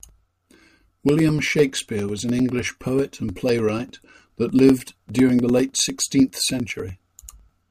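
A background task is stalling the USB bus or audio driver every 0.1 s in this speech recording, causing periodic USB or driver dropouts from 0.09 s to 7.6 s. Each stall leaves a gap of a few milliseconds of silence, heard as a steady ten-per-second ticking across some seventy events while the voice sounds.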